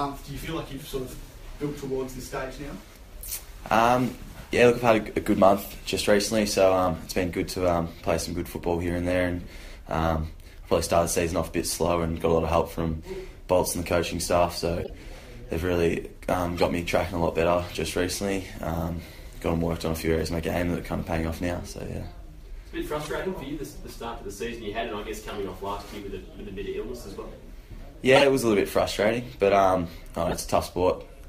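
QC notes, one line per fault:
14.81–14.90, 16.56–16.64, 23.01–23.08, 28.15–28.23 and 30.28–30.38 s: corrupt frame decoded. A few damaged compressed frames were played as is, spraying energy into wrong frequency bands as chirpy bursts peaking from about −25 to about −5 dBFS. Spectrogram shows short, misplaced vertical smears; waveform shows brief spikes.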